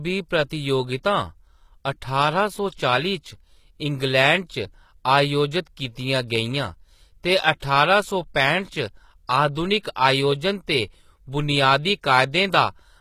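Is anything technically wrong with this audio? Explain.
Yes. The speech carries two coding faults.

Throughout, the treble sounds synthetic, with gritty, lispy s sounds and nothing above 14.9 kHz. The likely cause is HE-AAC compression at a low bitrate, roughly 20 kbps. The codec keeps the lower spectrum and rebuilds the top by copying lower bands upward, so the upper harmonics do not match the original.

At about 7.60 s, between "कीतियां गेइयां ते" and "ठारां सौ", a short hiss of about 25 ms precedes the attack, which sounds softened. This is pre-echo. Quantisation noise meant for the loud attack is spread across the whole transform block, including the quiet moment before it.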